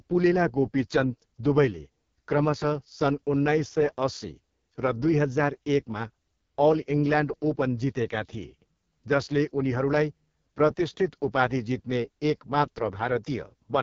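AMR wideband (HD Voice) codec damage runs from start to finish. The speech has been squeezed through a model that rebuilds the vocal tract from sparse pulse excitation. Here the coding is very coarse, which fits the lowest 6.6 kbit/s mode, so the voice comes out rough, raspy and buzzy. The top band is synthetic noise rather than real detail, and nothing reaches above 7.5 kHz, leaving the sound heavily processed.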